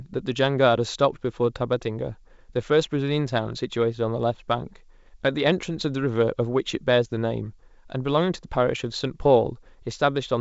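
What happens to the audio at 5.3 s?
Nothing goes wrong at 5.3 s: the speech passes through intact, carried by G.722 wideband telephone coding at 64 kbit/s with content reaching up to about 7.7 kHz.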